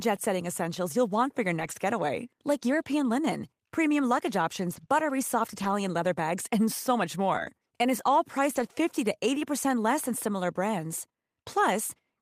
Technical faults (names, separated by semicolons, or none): lost packet rebuilt from error correction; short concealed packet loss